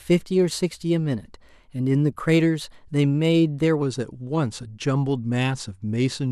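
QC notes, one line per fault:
0.00–3.82 s, wrong sample rate: speech runs about 1.09 times fast and roughly 1.5 semitones sharp, consistent with 44.1 kHz audio played back at 48 kHz without conversion.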